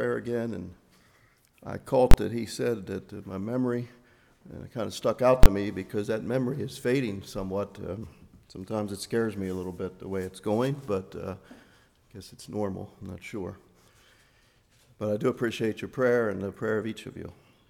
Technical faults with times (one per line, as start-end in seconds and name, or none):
2.11-2.14 invalid numbers at full scale
5.43-5.46 invalid numbers at full scale